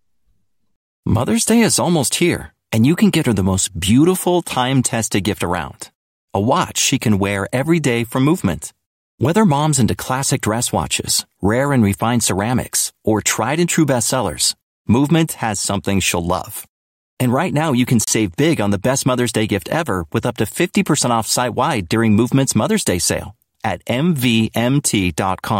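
At 18.04 s, between "right now you can" and "big on the best", a gap between stream segments opens a hard-edged hole of silence about 30 ms long. The timestamps of adjacent segments don't quite meet, and the player pads the difference with silence. The position fits a 6-second segment boundary, and no speech is lost.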